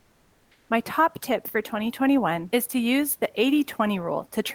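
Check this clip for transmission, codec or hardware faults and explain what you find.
One fault, at the very start. From 0.0 to 0.69 s there is comfort noise in place of the background, likely from discontinuous transmission: the sender stops sending and the receiver fills in a steady, featureless hiss about 5 dB quieter than the real room noise.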